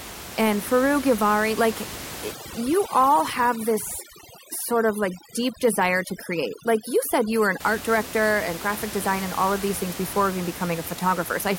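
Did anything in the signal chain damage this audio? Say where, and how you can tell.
Yes: overdone noise removal in the call processing, 2.32 to 7.60 s, ending just before "art director and graphic". Bands near the room-noise floor get gated away, leaving twinkly near-silence and taking quiet parts of the voice with them.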